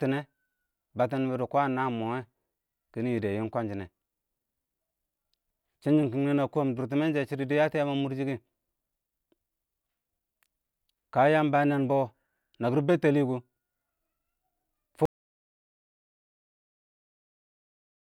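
A speech recording with an audio dropout to silence: at 15.05 s the sound cuts off mid-flow and stays silent through to the end at 18.15 s, about 3.1 s in all. The input was likely lost, through a disconnected device, a failed link or a mute, while the recorder kept writing silence. Unlike a noise gate closing or a fade, the cut is instant and leaves no room tone, and whatever followed is gone.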